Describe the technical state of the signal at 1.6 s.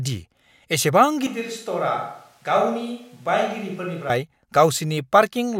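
At 1.6 s the speech sits inside a switch to a distant microphone (1.27–4.10 s), likely a far pickup replacing the close one. The sudden, roughly 10 dB drop, thinner bass and rising room noise set it apart from added reverb.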